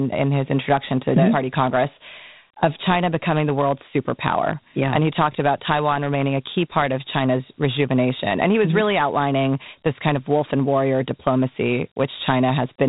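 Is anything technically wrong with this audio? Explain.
Yes. Throughout, the speech sounds thin and gritty, with a grainy hiss trailing each phrase and nothing above about 3.8 kHz. This is Dialogic VOX ADPCM: each sample is coded as a coarse 4-bit step from the last, which fits 32 kbps at an 8,000 samples-a-second rate.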